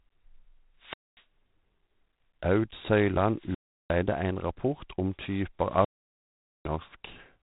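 From the start a harsh, rasping hiss rides on the speech, rising and falling with its level, and nothing passes above 3.8 kHz. This is G.726 ADPCM damage: too few bits per sample for the prediction error, which fits 24 kbit/s.

At 0.78 to 1.25 s, 3.32 to 4.04 s (ending just before "ein rapport om") and 5.63 to 6.78 s (just after "ein rapport om"), hiss swells, then near silence of about 0.24 s, 0.36 s and 0.81 s. This is wireless microphone squelch dropout: the fading FM signal made the receiver's squelch mute the output.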